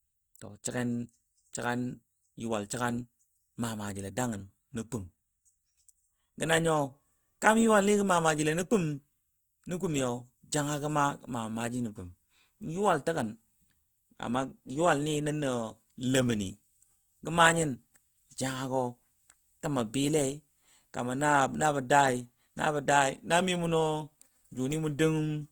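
Throughout, the speech sounds grainy and rough, with a noisy fizz in the upper bands. The likely cause is Opus compression in its music mode. Short of bits, it fills bands with noise or folded copies. The damage is plain and fits a rate near 24 kbps.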